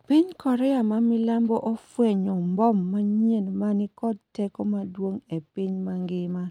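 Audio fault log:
No faults are heard in this speech clip. There is nothing to log against any point in it.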